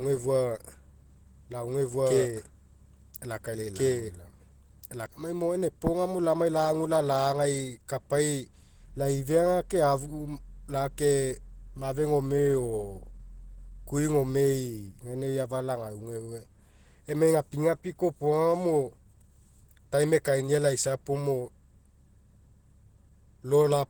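From the start to about 5.06 s, just before "lamai mo gaina", there's a doubled audio track: a second full-band copy trails about a second and a half behind at roughly equal level, likely from a second capture path, then stops abruptly. Throughout, the speech sounds hoarse, grainy and rough, pointing to Opus compression, likely in hybrid mode at a low rate around 16 kbps.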